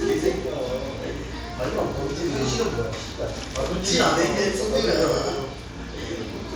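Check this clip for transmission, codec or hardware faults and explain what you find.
One fault runs through the whole clip: a resampler restarted on every block. Throughout, the audio carries a faint buzz at 50 Hz that is present only while there is sound. Each 20 ms block, apparently upsampled from 24 kHz to 48 kHz, was converted in isolation, leaving a small error at every edge. The waveform shows tiny steps every 20 ms, and the spectrogram shows thin vertical lines at that spacing plus a comb of 50 Hz harmonics.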